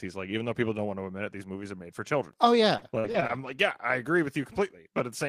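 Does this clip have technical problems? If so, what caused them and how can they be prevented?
Yes. Between 2.73 and 3.51 s the speech has repeated packet loss, heard as choppy, robotic sound. Five separate gaps fall in that stretch, the longest 45 ms, with about 140 ms of audio missing in total. The receiver covered each hole by extending the preceding sound, so around 18% of the span is concealment rather than real signal. The rapid succession of patched holes gives the broken quality. A larger jitter buffer and forward error correction on the network path would prevent it.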